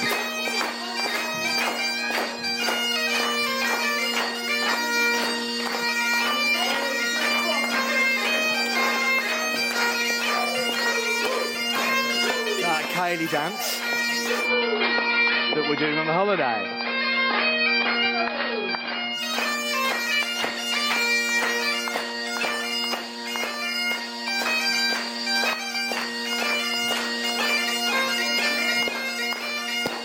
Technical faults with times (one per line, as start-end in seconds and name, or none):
14.39-19.24 digital radio blending to analogue